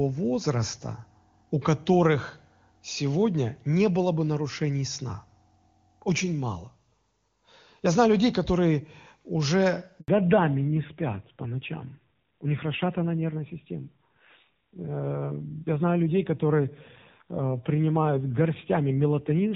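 At 10.00 s the speech cuts out for 80 ms, until 10.08 s, a handover gap: while the call moved between networks no speech frames arrived. Unlike a packet-loss glitch, nothing is concealed or smeared; the sound fades quickly into clean silence.

From 10.08 s to the end, a fallback to narrowband strips everything above 4 kHz. The call leaves AMR wideband (HD Voice), which before the gap sounds clear and fits its top 23.85 kbit/s rate, for a narrowband codec. The sound turns dull and rasping, pointing to the rough 7.4 kbit/s mode rather than a low-pass filter alone.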